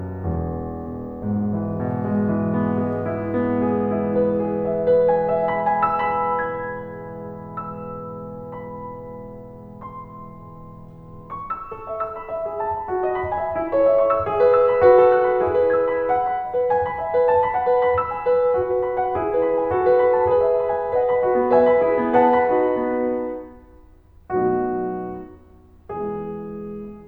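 No technical faults in this music.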